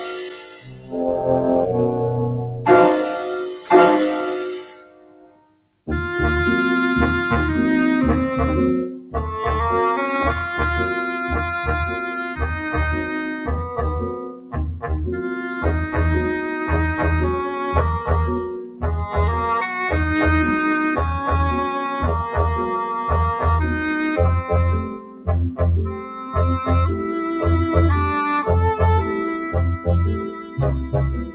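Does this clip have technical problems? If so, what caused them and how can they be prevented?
Yes. A noise suppressor made for speech was applied to music or sounds throughout. It treats steady tones and tails as noise, so the level swings by about 15 dB. Unlike a compressor's pumping, it keeps attacks while the sustained parts sink. It should be bypassed for non-speech sources.

The noise suppressor cut sound at 0 to 0.94 s (about 11 dB), and by about 14 dB at 2.56 to 5.87 s, 8.89 to 9.15 s, 13.3 to 14.56 s, 18.53 to 18.83 s, 24.81 to 27.12 s and from 29.37 s to the end. Unlike a dropout, the sound sinks and its decays are cut short rather than vanishing. Disabling suppression, or using a music mode, prevents these cuts.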